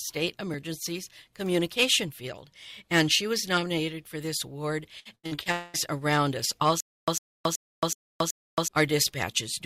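From 4.99 to 5.48 s, repeated packet loss (robotic sound) chops the audio: five short holes, the longest 82 ms, are patched by continuing the previous sound, giving a choppy texture.

At 5.52 s a continuous extension of the last sound runs for about 0.22 s, until 5.76 s, with no silence. This is likely a long network dropout, where the receiver kept extending audio that never arrived.

From 6.80 to 8.68 s, a stutter with silent gaps repeats one fragment of about 0.10 s five times, every 0.38 s, with roughly 0.27 s of digital silence between. The likely cause is a stalled stream replaying its last buffer.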